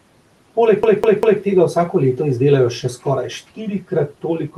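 A speech recording with a faint room noise bed, about 25 dB below the voice, has the fault of a CD stuck on one turn from 0.83 s to 1.42 s. A scratch keeps throwing the laser back one track, so a roughly 0.2 s slice (197 ms) plays three times, each jump marked by a brief mute. On a waveform this shows as identical blocks repeating at an even spacing, separated by thin gaps. On a spectrogram the same pattern tiles side by side, with narrow vertical dropouts between copies.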